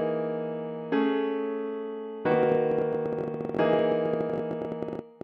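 A train of clicks runs from 2.32 s to 5.22 s, roughly fifty similar pulses arriving at about 16.2 per second with uneven spacing, so the ticking sounds ragged rather than metronomic. The clicks stand out well above the audio, peaking around 10 dB over it, and carry on through quieter moments too. Such a repeated, same-shaped impulse most likely comes from electrical interference from nearby equipment or a faulty connection or power supply.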